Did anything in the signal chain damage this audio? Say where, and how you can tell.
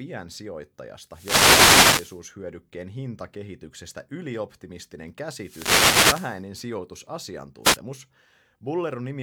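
Yes, the damage is at the analogue radio link, before any conversion. There are three wireless microphone noise hits: a burst of static from 1.09 to 2.22 s, another from 5.36 to 6.44 s just after "hintakehityksestä ylioptimistinen", and a brief swish at 7.63 to 7.78 s. In each one the FM signal fades as reflections cancel it, so receiver hiss swells up.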